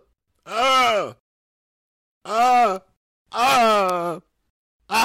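Three sharp, isolated ticks cut through the audio at 0.52 s, 2.76 s and 3.90 s. The first two peak at about -19 dBFS. The third is louder, at about -7 dBFS. Each is a bit error spike: one bit flipped in storage or on a digital link, so a sample leapt by a power of two and snapped back. The first two fit a single corrupted sample and the third a pair. That broadband click has no connection to the surrounding sound.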